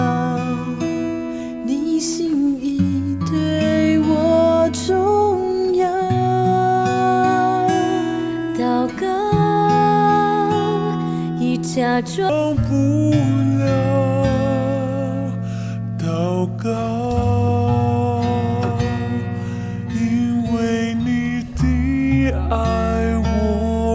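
Wrong sample rate from 12.29 s to the end: audio recorded at 22 kHz plays back at 16 kHz, slowing it to 0.726x speed and dropping pitch 5.55 semitones.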